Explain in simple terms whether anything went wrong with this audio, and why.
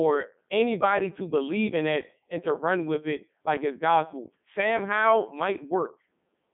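Codec 2 vocoder, throughout the speech: the voice was rebuilt from a few pitch and tone settings rather than kept as recorded, so it sounds robotic, buzzy and muffled.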